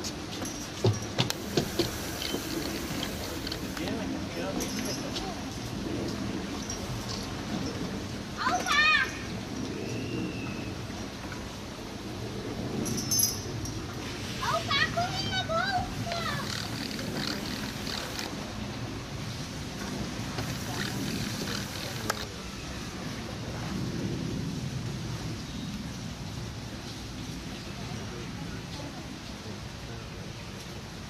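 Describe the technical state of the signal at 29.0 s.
At 29.0 s the signal is intact, with no audible technical fault at that moment.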